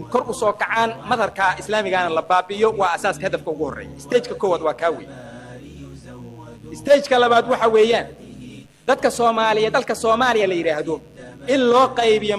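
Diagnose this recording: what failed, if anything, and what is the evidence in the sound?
A dimmer, rectifier or missing shield in the analogue wiring is letting mains interference into the path. The result is mains buzz at 50 Hz that runs for the whole recording, roughly 40 dB below the signal. Switching spikes from a dimmer, rectifier or unshielded run arrive twice per mains cycle. This spreads harmonics of 50 Hz up into the kilohertz range, so the buzz sounds raspy rather than like a pure low hum.

Twice the playback rate jumps up for a stretch and then snaps back, from 0.33 to 1.22 s and from 8.93 to 10.42 s. Each time, speed rises by 5.7 percent and pitch by 96 cents, close to a semitone, so the sound briefly goes sharp and faster together. This is likely a drift correction step in the driver or buffer stage. Clock-matching software changed the rate in one abrupt step to rebalance its buffer instead of adjusting gradually.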